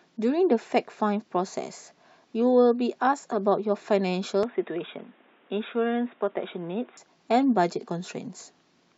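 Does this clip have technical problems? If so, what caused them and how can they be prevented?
Yes. From 4.43 s to 6.97 s the speech turns dull and boxy, with nothing above 3.8 kHz, then opens up again. There is no gap at either transition and the level barely changes, but a new background noise appears, roughly 30 dB below the speech. This is likely an input switched to a poorer device, such as a narrowband headset profile or a second microphone. Pinning the input device and disabling automatic device switching during recording prevents it.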